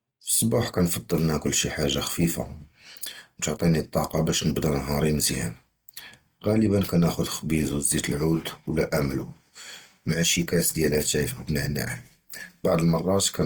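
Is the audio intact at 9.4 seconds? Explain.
No. At 9.4 s the speech carries Opus compression damage, as it does throughout. Band energies are kept, but starved bands get filled with folded or noisy content. That makes the speech rough and grainy. The damage is plainly audible and likely points to a low rate near 24 kbps.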